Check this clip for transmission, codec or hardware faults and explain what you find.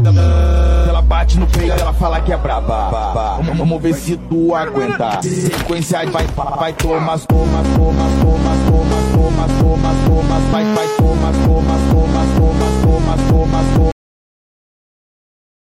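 One fault is present: a cut-off end. At 13.92 s the audio stops mid-sound and falls straight to digital silence, which lasts the final 1.8 s. The last buffers of the stream were never written or played back, so the signal is severed while still sounding. A natural ending or fade-out would taper away, and a dropout would resume afterwards. Here there is no decay at all, and nothing returns.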